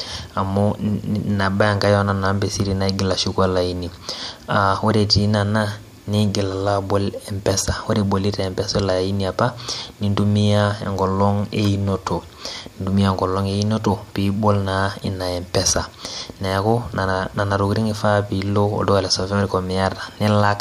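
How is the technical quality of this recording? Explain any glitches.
The recording has no audible technical glitches, and the signal comes through intact with nothing breaking into it.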